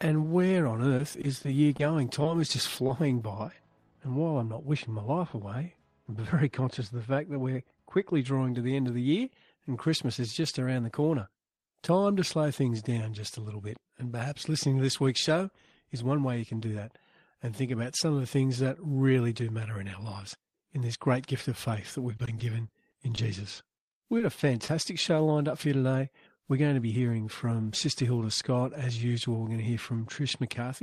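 Scattered short gaps from 0.97 to 2.27 s: about five lost packets, each patched by extending the preceding sound, leave brief ticks and hiccups across that stretch.

Short concealed packet loss at 2.87 to 2.91 s: 20 ms failed to arrive, and the continued sound filling the hole gives a brief smear.

De-emphasis applied wrongly from 3.44 to 8.25 s: an unneeded treble cut slopes the response down by about 14 dB at 10 kHz, sounding dull and muffled.

Repeated packet loss (robotic sound) from 22.17 to 24.70 s: about a dozen holes, none over 20 ms, are patched in quick succession, giving choppy sound with pieces missing.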